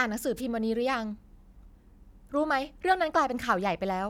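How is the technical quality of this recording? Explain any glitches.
One glitch stands out: a wireless microphone noise hit from about 0.36 to 0.41 s, lasting roughly 50 ms. For that moment the radio link from an analogue FM microphone faded, as reflected copies of the signal cancelled the direct one, so the receiver's own noise rose over the speech as a brief swish of static. Unlike a digital dropout, the sound isn't replaced by silence or a repeated fragment. It's buried under hiss that swells and clears.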